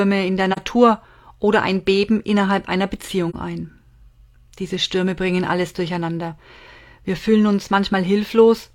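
This speech clip has two soft dropouts from AAC frame loss with muting: 43 ms gaps at 0.52 s after "in der" and 3.29 s after "innerhalb einer". Each fits one zeroed frame faded by the overlapping windows.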